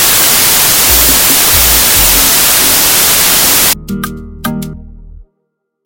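A wrong sample width, consistent with packed 24-bit data read as 32-bit, buries the audio in loud noise, running 1.33 times fast, from 0.0 to 3.73 s.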